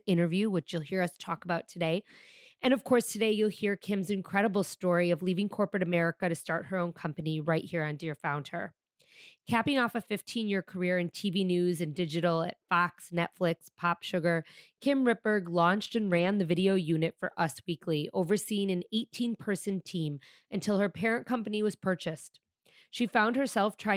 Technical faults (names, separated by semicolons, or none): lost packet rebuilt from error correction